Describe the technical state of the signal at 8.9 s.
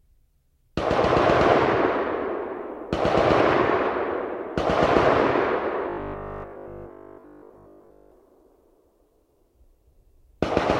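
At 8.9 s the sound is intact, with no fault present at that moment.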